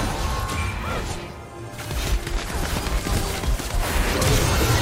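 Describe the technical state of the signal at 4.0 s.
At 4.0 s the signal is intact, with no audible dropout, distortion or other technical fault.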